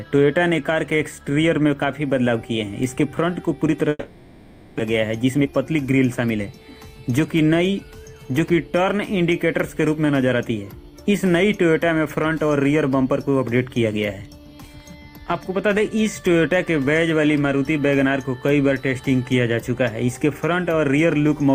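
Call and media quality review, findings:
Long network dropout, 3.89 to 4.81 s: last sound stretched into a fading buzz, then near-silence; about 0.6 s never returns, likely packet loss on the network path.

Jitter buffer speed-up, 4.93 to 6.54 s: audio runs about 117% fast at unchanged pitch, hurried feel, trimming roughly 0.3 s of backlog from late packets.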